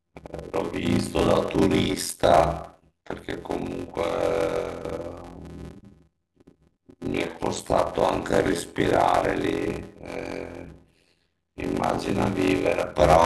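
Block size mismatch (padded) runs through the whole clip. One stage hands over shorter blocks than the next stage reads, and each block is topped up with silence. The regular gaps produce a buzz at about 86 Hz, which fits a 512-sample read size, and the speech plays at 0.625 times its normal speed while keeping roughly its normal pitch. That ratio points to blocks of about 320 samples being written into each 512-sample read.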